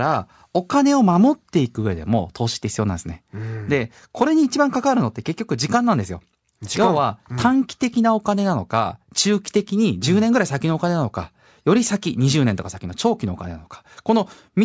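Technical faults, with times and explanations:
No technical fault is heard anywhere in this speech recording. There is nothing here to time or explain.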